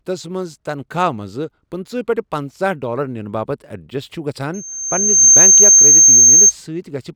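At 4.54 s a loudspeaker feedback squeal begins: the microphone is picking up its own loudspeaker, and at 6.4 kHz the loop gain exceeds unity. The tone swells in under a second to roughly 15 dB above the speech and holds until 6.53 s.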